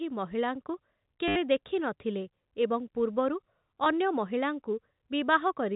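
At 1.28 s, 80 ms of audio failed to arrive, and the receiver covered the gap with packet loss concealment, replaying the last packet received until fresh data returned at 1.36 s. The run buzzes at about 100 Hz, which fits 10 ms packets. A shorter 20 ms dropout at 3.84 s gives a brief stutter over the narrow telephone band of the G.711 link.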